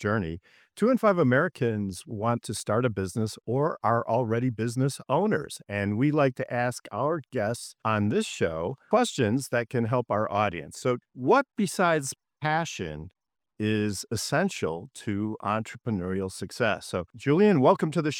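Nothing in the audio stood out as a technical fault on listening.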